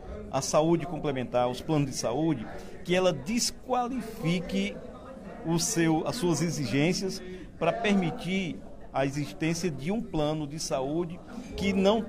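No faults are audible anywhere in the clip.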